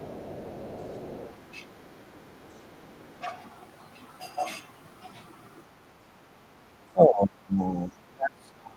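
A faint second voice sits underneath the talker from the start to 1.37 s, roughly 25 dB down, and returns much fainter, around 40 dB below, from 1.79 to 2.1 s and again from 2.54 to 3.13 s. This is the other side's voice leaking through. The far end was likely playing on a loudspeaker, and the echo canceller left part of it in the microphone signal.

Between those scraps, from 2.15 to 2.53 s, the talker's own voice sags by up to around 15 dB for about a fifth of a second. From 3.21 to 3.35 s it dips again, only by a few dB. Both dips are speech suppressed in double talk. With the two sides talking over each other, the canceller likely could not tell the local voice from the echo and pulled everything down together.

From 5.97 to 6.1 s the room sound drops by about 10 dB for roughly 150 ms, then comes back. This is background gated by the echo canceller. It clamped the microphone hard while the loudspeaker was active, taking the ambience with it.

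The heaviest suppression comes late. From 6.9 to 7.69 s the voice falls away by as much as 30 dB across most of that span. From 7.88 s to the end it sinks by around 35 dB. Both stretches are again speech suppressed in double talk, with the overlapping far-end sound likely driving the attenuation.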